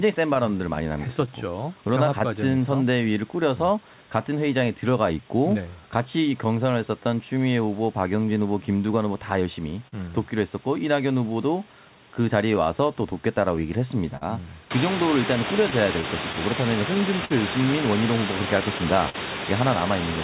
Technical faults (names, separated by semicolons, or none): clock drift between sender and receiver; repeated timing corrections; scattered short gaps; short stall from a late packet